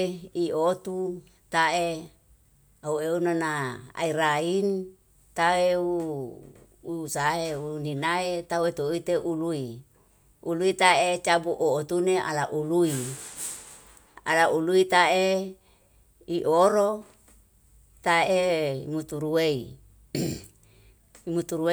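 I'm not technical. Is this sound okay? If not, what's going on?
Yes, it's fine: nothing goes wrong anywhere in the recording, so there's nothing to worry about.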